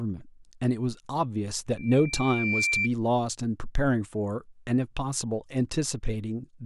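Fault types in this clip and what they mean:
Loudspeaker feedback squeal: the microphone re-amplifies its own loudspeaker until a 2.4 kHz tone runs away, swelling over under a second to about the speech level between 1.77 and 2.89 s. A spectrogram shows a brightening horizontal line; the waveform shows a growing envelope.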